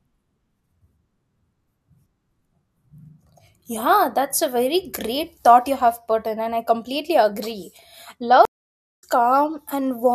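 At 8.45 s a stream reconnect cuts the speech to silence for about 0.57 s; when audio returns at 9.03 s, it resumes roughly 0.4 s further along.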